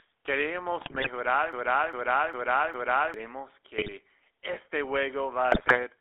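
The whole clip passes through the GSM full-rate codec, which rebuilds speech from a coarse vocal-tract model excited by sparse, regularly spaced pulses. That leaves a plainly audible buzzy, gravelly roughness on every syllable. The line band runs from about 250 Hz to 3.6 kHz, so the sound is thin, with no low body and no air on top. The faint room noise, about 48 dB below the speech, comes through the same narrow band.

From 0.80 to 1.08 s the first burst of GSM bit errors hits. Corrupted bits reached the decoder, and the damaged filter, pitch and gain values bent the spectrum and threw the level around frame by frame. The speech breaks into squawks, pops and gargling for that stretch.

From 1.53 to 3.14 s a broken-record loop takes over. The stream most likely stalled, so the last fragment it held was sent again instead of new audio. A piece about 0.4 s long repeats exactly, back to back, four times. 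Whatever should have been heard in that span is gone.

Two more GSM bit-error bursts follow, a short one from 3.77 to 3.89 s and a heavier one from 5.52 to 5.79 s. Each produces the same garbled, squawking distortion as the corrupted frames reach the decoder.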